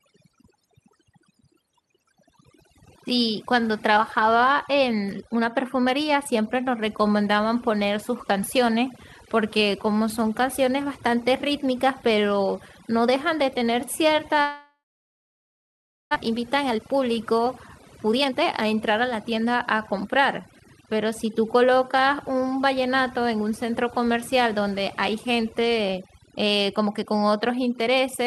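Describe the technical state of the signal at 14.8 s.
At 14.8 s the sound has broken off. From 14.41 s to 16.17 s a fading buzz or hiss carries on the last sound, then gives way to silence, and audio resumes having skipped about a second. This is likely a long network dropout rather than a brief packet glitch.

Overdone noise removal also runs throughout. The suppressor switches off individual frequency bands near its noise estimate, leaving twinkling specks in a lowered background, rather than the steady smearing of a low-bitrate codec.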